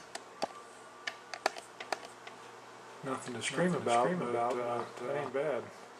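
From 1.81 s to 5.29 s a doubled audio track appears: a second, full-band copy of the sound trails the original by about half a second, roughly 5 dB quieter, with no decay or room colour. It likely comes from the signal being captured again through a slower path. The copy switches on and off abruptly. On a spectrogram every pattern repeats, fainter, a fixed half-second later, and the waveform shows each transient echoed at that offset.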